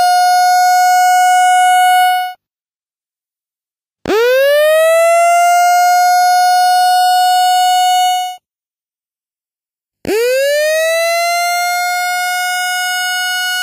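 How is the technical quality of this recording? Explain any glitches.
The recording has one fault, present throughout: channels drifting apart. The two channels run on clocks that disagree by about 70 parts per million. The delay between them slowly grows to under a millisecond. Summed to mono, comb notches sweep slowly downward, giving a slow flanging swirl.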